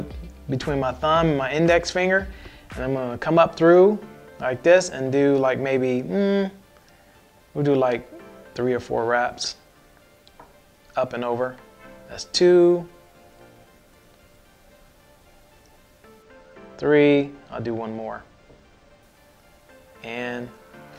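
From 16.23 s to 19.03 s, one channel runs about two samples behind the other before the pair is folded to mono, a channel delay causing comb filtering. The cancellation puts the first notch near 10 kHz, so the top end turns dull.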